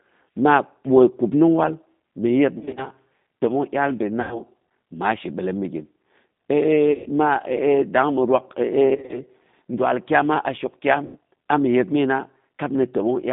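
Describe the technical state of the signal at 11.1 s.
At 11.1 s the speech sits inside a VoIP packet loss concealed by the speech codec, from 11.06 to 11.17 s. About 90 ms of audio was lost, and the decoder filled it by repeating its last pitch and vocal tract filter at falling gain, giving a buzzy tone or coloured noise that fades. The speech stays weak or distorted for tens of milliseconds or more after packets return.

Throughout, including this moment, the G.729 codec damage is plainly audible. The line band runs about 150 Hz to 3.7 kHz, and the rough, synthetic texture fits an 8 kbit/s model-based rebuild.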